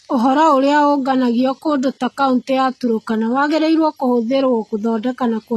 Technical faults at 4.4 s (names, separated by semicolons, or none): HE-AAC compression